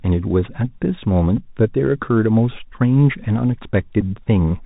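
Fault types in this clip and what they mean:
Bluetooth CVSD headset codec: One-bit delta coding at 64 kbps removes everything above 4 kHz and leaves steady granular hiss and scratchy s sounds, unlike plain lowpass filtering.
Bluetooth headset packet repeated: Brief buzzy stutters at 1.37 s and 4.01–4.03 s, spanning 7.5 and 11.2 ms, fit re-decoded packets rather than silent dropouts.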